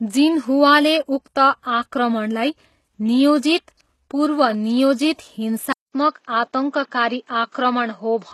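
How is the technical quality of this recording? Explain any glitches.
The speech has two audible faults, one across the whole clip and one near the end.

Throughout, the treble sounds synthetic and gritty, with nothing above 12.4 kHz. This is likely HE-AAC compression rebuilding treble from lower bands, which fits a bitrate around 16 kbps.

At 5.72 s, a 200 ms silence gives way to duller, narrower sound ending at 7.6 kHz, with a new noise floor well below the speech and the level roughly unchanged. The input was likely switched to a poorer device.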